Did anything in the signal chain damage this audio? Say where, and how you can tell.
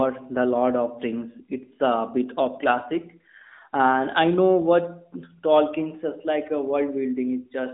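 No, nothing in the signal chain stood out as damaging on listening.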